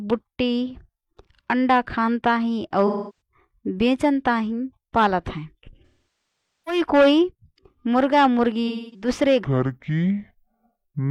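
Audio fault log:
2.87–3.21 s, 5.85–6.81 s, 8.67–9.08 s, AAC frame loss with concealment: smeared, noisy patches where lost frames were filled from the last good spectrum, the middle one longest.
9.44–11.11 s, section at the wrong speed: speech turns deep and slow, at 0.63 times speed and roughly seven semitones lower, likely from playback against the wrong clock.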